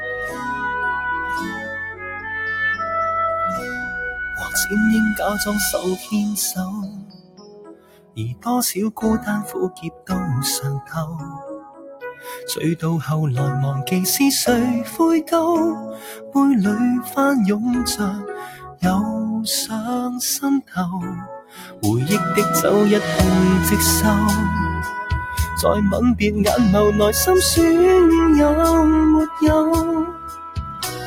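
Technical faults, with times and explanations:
Throughout: sample clock jitter. An unsteady converter clock mistimes samples, adding a faint hiss at about -45 dB that grows on loud, bright passages, which fits sub-microsecond timing error.
Throughout: noise suppressor applied to music or sounds. A speech-tuned suppressor treats sustained content as noise, so level swings by roughly 10 dB, pumping and thinning held sound.
0.00–4.55 s, 5.77–12.27 s, 15.23–16.35 s, 18.48–18.82 s, 20.62–21.83 s, 30.05–31.07 s: sound cut by the noise suppressor. Steady and decaying sound sinks, by about 10 to 18 dB at worst, while sudden attacks pass largely intact.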